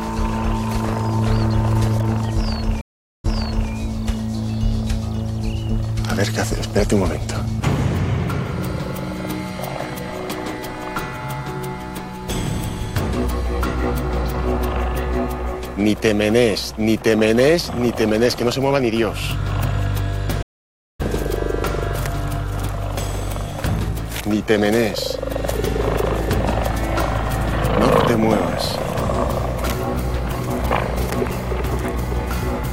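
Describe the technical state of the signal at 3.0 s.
A stream reconnect runs from 2.81 to 3.71 s: the connection broke, leaving 430 ms of silence, then a fresh decoder restarted mid-stream. Unlike a plain dropout, playback resumes 0.46 s earlier, so the sound just heard repeats.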